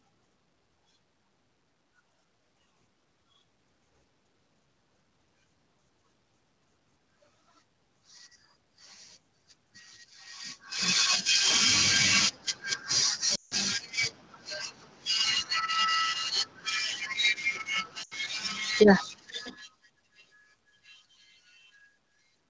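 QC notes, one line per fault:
13.35–13.54 s and 18.03–18.14 s, lost AMR speech frames: Radio errors corrupted speech frames, so the decoder concealed them by replaying the last good pitch and vocal-tract settings at falling gain. The first gap lasts 160 ms, which fits roughly eight 20 ms frames. The sound drops to near silence within two frames, as wideband concealment does. The second gap lasts 80 ms and also drops to near silence. After each gap the audio returns briefly weak or rough.
18.67–21.58 s, automatic gain falling: The automatic gain control judged the input too loud or its background noise too strong and lowered its gain gradually by about 8 dB across these three seconds. The sound starts full and then sinks steadily, and the room background drops with it, which marks this as a gain change rather than a level change at the source. A talker shift near 19 s overlaps the start, but the slow, joint fade of sound and background continues well past it.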